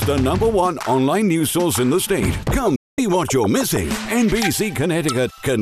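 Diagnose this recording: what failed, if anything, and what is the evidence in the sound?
What failed is reception. This is a digital broadcast dropout. At 2.75 s the sound fades out in about 8 ms, not a hard click, and the channel stays silent until 2.99 s before picking up again further along. That gap of roughly 230 ms, about 216 ms of it truly missing, fits something like nine corrupted frames. The receiver muted rather than play bad data, so whatever went out during that stretch is simply gone.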